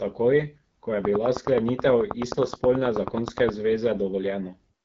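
From the start the speech has the rough, raspy edge of the AMR wideband (HD Voice) codec at one of its lowest rates, which fits about 8.85 kbit/s. Nothing comes through above 7.3 kHz, and the top band is filled with shaped noise rather than real detail.

Right after "ko je", from 1.05 to 3.50 s, a regular train of clicks ticks along at about 9.4 per second, roughly twenty in all, standing well above the speech and audible in the gaps too. The likely cause is interference from nearby equipment or a faulty connection or power supply.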